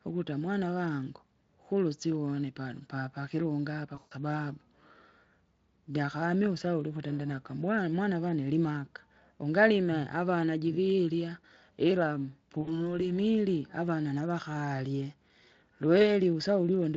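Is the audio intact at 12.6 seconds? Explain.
No. From 12.61 to 12.95 s, right after "ungalime avana jivirya ila", there is VoIP packet loss concealed by the speech codec. About 60 ms of packets went missing, which fits three lost 20 ms Speex frames. The decoder filled the hole by extrapolating from its last pitch and filter settings while lowering the gain, so the sound smears into a fading buzzy tone or coloured noise. It stays weak or distorted for a while after the packets resume, because each decoded frame builds on the previous one.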